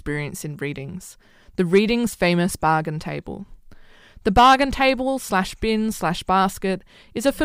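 Hard clipping occurs three times in this speech: 1.74–1.78 s, overdriven about 3 dB; 4.28–4.90 s, about 6 dB, just before "slash bin slash"; and 7.27–7.29 s, about 2 dB. The peaks exceed the stage's range and are cut flat, adding high harmonics. The brief events crackle, and the longer one sounds harsh and fuzzy.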